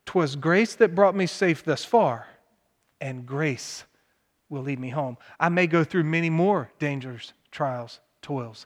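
From 4.62 to 5.72 s the speech jumps 5.2% faster and 88 cents sharp, then snaps back, likely a drift correction step nudging a clock-sync buffer.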